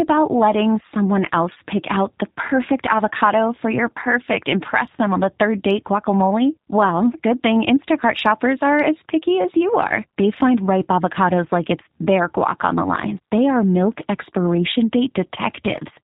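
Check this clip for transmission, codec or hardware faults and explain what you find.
Two faults are present: plainly audible low-bitrate codec coding throughout, and one concealed packet loss.

The G.729 codec is audible across the whole clip. At 8 kbit/s it resynthesises speech from a vocal-tract filter, a pitch predictor and a few pulses per frame, so the sound is rough and slightly synthetic. On a spectrogram, nothing appears above 4 kHz.

VoIP packet loss concealed by the speech codec occurs at 2.38 s, between "else pick out the" and "avocado for your perfect". About 20 ms of audio is missing, which fits a single lost packet. The decoder filled the gap by extrapolating its last pitch and filter settings. On the spectrogram, the harmonics hold flat across the gap instead of moving. In the waveform, the amplitude dips and then takes a few frames to recover.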